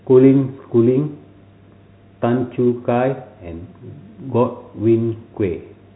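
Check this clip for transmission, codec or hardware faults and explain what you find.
No faults found; the narrow telephone band on the speech is just the G.711 coding doing its normal job.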